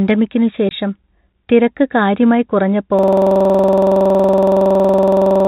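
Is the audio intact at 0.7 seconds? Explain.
No. From 0.69 to 0.71 s the speech drops out for 20 ms because of packet loss filled with silence. The receiver never got those packets and played silence in their place, which fits two 10 ms packets. You hear a brief hole with hard edges. The waveform shows a flat line cut abruptly out of the speech, and the spectrogram shows a narrow blank column.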